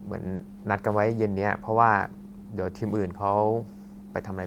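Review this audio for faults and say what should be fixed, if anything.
There's a short concealed packet loss at about 0.35 to 0.41 s. Roughly 40 ms of the speech didn't reach the decoder in time, so the receiver extended the preceding sound and blended back in, leaving a quick smear. A deeper jitter buffer or forward error correction on the link should stop it.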